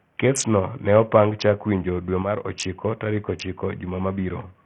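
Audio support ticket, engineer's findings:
Throughout: gritty, coarsely quantised speech, flickering treble, nothing above 16.5 kHz. Likely Bluetooth SBC compression at a starved bit pool, with the upper sub-bands getting almost no bits.

2.22–2.45 s, just after "chak winjo dwe": abrupt level drop of about 6 dB. Likely one channel drops out, and the mono sum loses half of the common signal.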